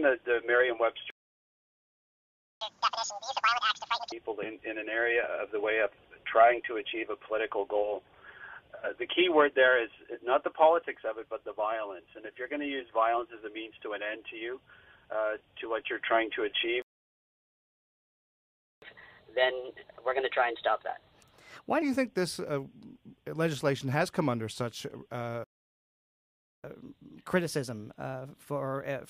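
Playback stalls at 1.10 to 2.61 s, 16.82 to 18.82 s and 25.44 to 26.64 s cut the sound to silence mid-flow. The player likely ran out of data. Each stall ends in catch-up at higher speed, as the backlog is resampled. It plays at double speed until 4.12 s, pitched up about ten semitones. Then it runs 1.15 times fast until 21.82 s, and 1.1 times fast to the end, both only slightly raised.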